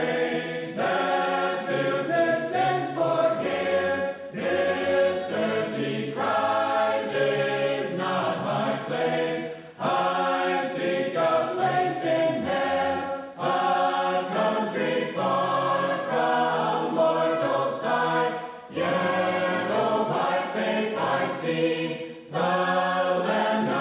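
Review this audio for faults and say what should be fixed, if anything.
Nothing here needs fixing. The audio comes through a call path with nothing above 4 kHz, the narrowband telephone sound you would expect from a codec such as G.711 A-law.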